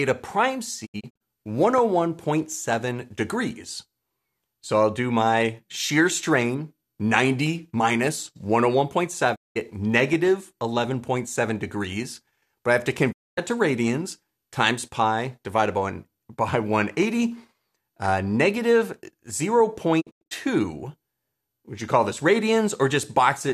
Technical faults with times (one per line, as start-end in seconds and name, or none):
0.85-1.22 digital broadcast dropout
9.34-9.57 digital broadcast dropout
13.11-13.39 digital broadcast dropout
20.00-20.33 digital broadcast dropout